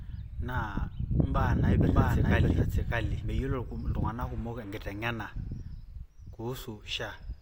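From 1.35 s to 3.55 s the speech carries a doubled audio track. A second full-band copy runs about 0.7 s behind the first, at roughly the same loudness. It has no decay and no room colour, so it is not an echo. It switches on and off abruptly at those two points. The likely cause is an edit holding two out-of-step copies, or a second capture through a slower path.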